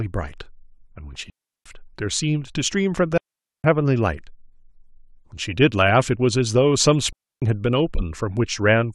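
Speech, and the signal drops out three times with clean holes of near silence: 1.30 to 1.66 s (about 360 ms), 3.18 to 3.64 s (about 470 ms) and 7.13 to 7.42 s (about 290 ms). That's a classic digital wireless dropout. The link lost too much data, so the receiver muted with a very quick fade rather than passing garbage, which is why there's no crackle or noise burst on either side of each gap.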